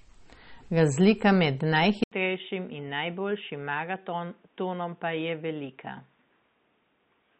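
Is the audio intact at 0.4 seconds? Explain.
No. Starved encoding, likely MP3 compression at a rate fitting about 32 kbps, runs throughout, cutting everything above 8.4 kHz and leaving the speech dull, watery and swirly.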